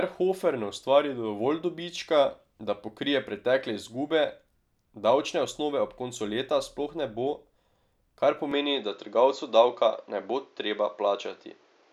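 Speech, and at 8.52 s it suddenly goes duller, capped around 7.3 kHz, slightly louder, with a faint new noise floor, most likely the input switching to a poorer device.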